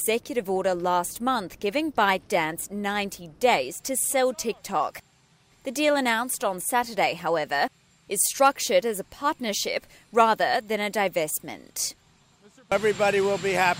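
No technical faults can be heard in this audio.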